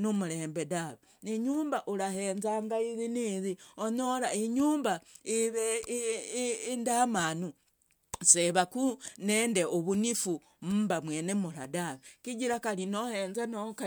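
No dropouts, glitches, level jumps or other technical faults occur anywhere in the recording.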